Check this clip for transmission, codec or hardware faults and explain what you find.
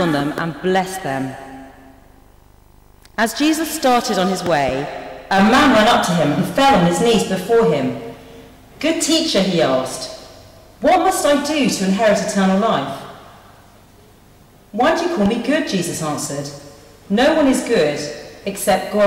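Two faults are present: hard clipping across the whole clip, and three loud pop events on top of it.

Hard clipping runs throughout. The signal was driven about 15 dB beyond what some stage could pass, so its peaks were cut flat, with roughly one sample in twenty over the limit. Those flattened tops generate harmonics high in the spectrum, heard as fuzz riding on every loud moment. Unlike a pop, it follows the sound's own loudness rather than arriving as separate events.

Loud pops occur at 0.38 to 0.40 s, at 4.46 to 4.71 s (two pops in quick succession), and at 15.26 to 15.28 s. A sudden voltage step or pulse was added to the signal, likely from a plug, switch, static discharge or driver glitch. The first and last peak around 20 dB above the surrounding sound, the pair around 10 dB. Each is a sharp pop or thump over the sound, which continues underneath, so nothing is lost as it would be in a dropout.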